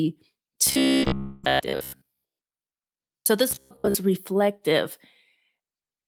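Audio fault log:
0.67–3.26 s and 3.51–3.95 s: robotic sound from repeated short buffers. The speech in these spans becomes a rigid 66.7 Hz buzz, likely from repeating a 15 ms buffer, visible as evenly spaced vertical striations on a spectrogram.
0.97–1.12 s and 1.04–1.08 s: short concealed packet loss. Gaps of 40 ms and 20 ms are bridged by synthesized continuation, heard as a brief smear, with smoothed, repetitive waveform cycles.
1.19–1.45 s: long network dropout. About 240 ms of audio is likely missing, replaced by a continuation of the last sound fading without reaching silence, seen as a decaying, featureless spectrogram band before speech resumes.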